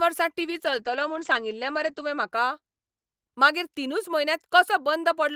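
Speech with a call bitrate drop from 0.4 to 2.35 s: coarse, watery coding and highs cut to 8 kHz, fitting about 11 kbps. Unlike packet loss, nothing drops out.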